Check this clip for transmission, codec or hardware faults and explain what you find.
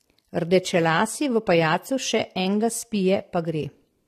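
One codec fault runs through the whole speech clip. Throughout, the sound is dull and fizzy, likely from AAC compression at a low bitrate, perhaps near 32 kbps. The lowered encoder cut-off leaves nothing above 14 kHz, so a spectrogram shows a hard ceiling there with patchy, holed bands beneath.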